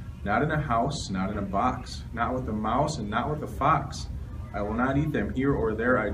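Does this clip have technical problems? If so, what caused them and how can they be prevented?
No audible technical faults detected.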